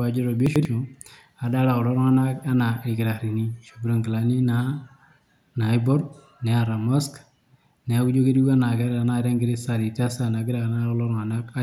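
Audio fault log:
0.46 to 0.65 s, chunks out of order: two blocks of speech about 93 ms long play swapped, the later one first. Nothing is missing, but the sequence jumbles briefly. There are three hard joins at the swapped edges.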